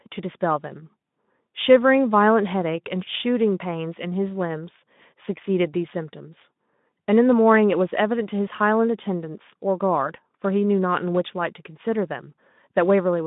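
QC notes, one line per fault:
No faults found in this speech clip.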